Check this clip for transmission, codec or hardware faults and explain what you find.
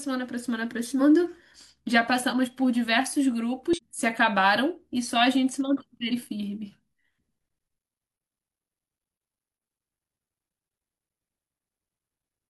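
One codec fault recurs three times in the speech. Damaged data in a compressed stream, at 0.96–1.01 s, 3.73–3.80 s and 6.08–6.13 s: short glitches, as corrupted frames knock the decoder out of sync until it finds the next frame header.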